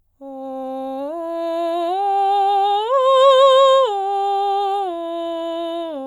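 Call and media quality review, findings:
No technical faults were found in this music clip, and the signal holds steady with no dropouts, level jumps or timing disturbances anywhere in it.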